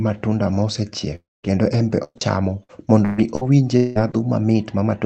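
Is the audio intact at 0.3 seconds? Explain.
Yes, the audio is intact at 0.3 seconds; the speech there simply carries the Opus call path's usual coding character, with the top end stopping around 8 kHz.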